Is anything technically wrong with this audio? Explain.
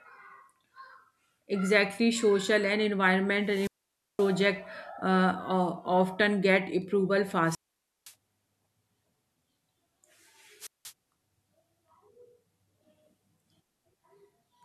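Yes. There are three wireless microphone squelch dropouts in this speech, at 3.43 to 4.37 s, at 7.44 to 8.14 s just after "often get approval", and at 10.59 to 10.93 s. The radio signal fades, hiss swells briefly, and the receiver's squelch mutes the output. That leaves near-silent holes of 0.52, 0.51 and 0.18 s before the speech returns.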